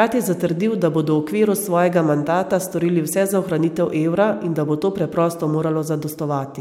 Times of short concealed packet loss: none

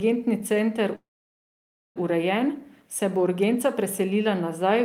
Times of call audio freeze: 0.95-1.98

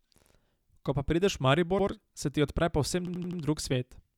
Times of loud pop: none

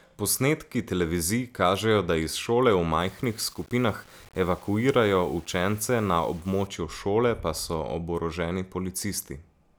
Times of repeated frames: none

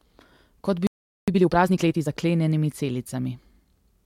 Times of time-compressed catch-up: 1.28-2.08

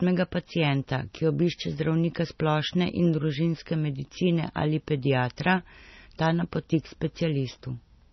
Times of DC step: none

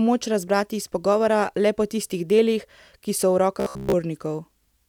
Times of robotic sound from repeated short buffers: 3.60-3.93

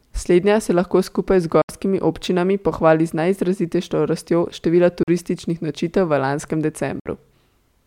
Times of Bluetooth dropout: 1.61-1.69, 5.03-5.08, 7.00-7.06

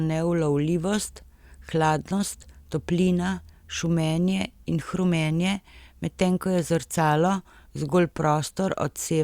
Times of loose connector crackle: none

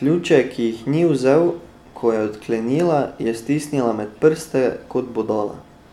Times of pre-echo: none

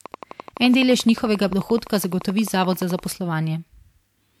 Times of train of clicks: 0.06-3.00

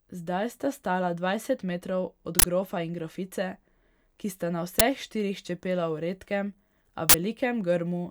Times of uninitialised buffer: 2.39-2.44, 4.79, 7.09-7.14

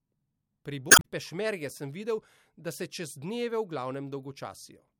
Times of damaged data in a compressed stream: 0.88-1.05

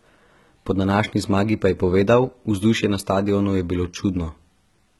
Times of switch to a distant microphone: none

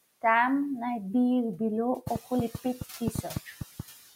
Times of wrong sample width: none

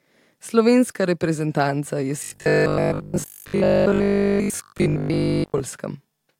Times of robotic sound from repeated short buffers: 2.24-5.60

